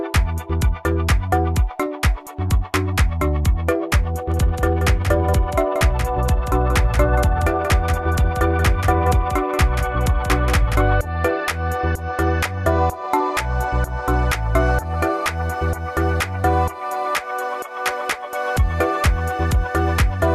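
From 4.32 s to 10.76 s a second, quieter copy of the sound runs about a fifth of a second behind the first, cutting in and out abruptly with no decay or room colour. This doubled audio track likely comes from the same audio being captured twice along paths of different speed.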